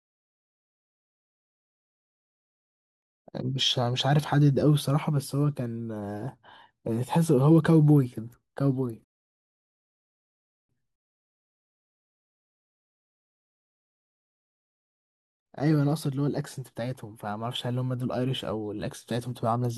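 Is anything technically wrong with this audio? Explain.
Yes. At 9.04 s the speech cuts to silence and picks up again at 10.69 s exactly where it left off, with nothing skipped. This is a rebuffering stall: playback ran out of downloaded audio and paused until more arrived, adding about 1.65 s.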